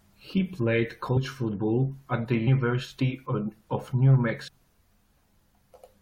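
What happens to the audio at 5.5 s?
Nothing goes wrong at 5.5 s; the speech plays through that moment intact, with no dropout, click, glitch or other fault.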